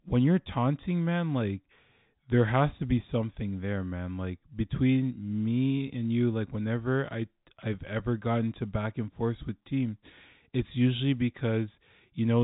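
No faults: the speech carries G.711 telephone coding, with nothing above 4 kHz and at most a faint trace of the codec's own noise.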